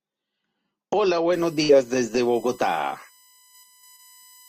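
From 1.33 s to the end, current drawn by the USB bus in 1 ms frames leaks into the audio path through the power or ground, producing a USB whine: a fixed-pitch 1 kHz tone with a harmonic series reaching up to its strongest component at 19 kHz, sitting around 25 dB below the speech.

At 1.63 s a burst of packet loss leaves the receiver without audio until 1.72 s. It bridges about 53 ms by continuing the last sound and fading it, heard as a held buzz or fading hiss, then resumes with about 60 ms of speech gone.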